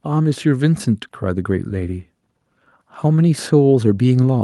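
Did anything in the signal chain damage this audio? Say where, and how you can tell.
Yes. Automatic gain rising in call processing: speech and background swell together by about 4 dB from 0.05 to 2.06 s, and again from 2.71 s to the end, as the gain control lifts a quiet input.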